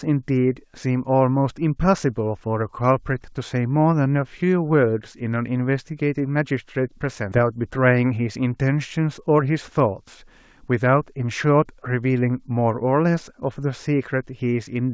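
A speech clip carried over a call link, its spectrum stopping at 8 kHz in a way that fits a wideband codec such as G.722, with two faults close together. At 7.32 to 7.34 s there is a skip ahead: roughly 0.7 s of audio never plays. It was lost in transit or discarded when the jitter buffer overflowed with newer audio already queued, so playback jumps straight to the later material with no filler. On a waveform the two sides butt together with no gap or fade. On a spectrogram the harmonic pattern changes abruptly at one vertical line, often with a faint broadband click at the splice. Right after, from 7.42 to 8.37 s, comes a jitter buffer speed-up. The buffer was still holding more than its target, so the receiver trimmed short pitch-period slices again and again, removing about a tenth of a second and playing that stretch at 108% speed with unchanged pitch. It sounds slightly hurried. A spectrogram shows syllables and harmonic stripes packed a little tighter while their spacing in frequency stays the same.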